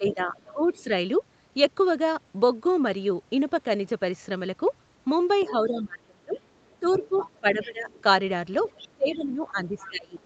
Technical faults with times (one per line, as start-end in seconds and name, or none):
0.00-0.90 speech suppressed in double talk
0.07-0.83 other side's voice leaking through
5.40-5.63 other side's voice leaking through
5.48-7.89 speech suppressed in double talk
6.32-8.02 other side's voice leaking through
8.61-10.25 other side's voice leaking through
8.89-10.21 speech suppressed in double talk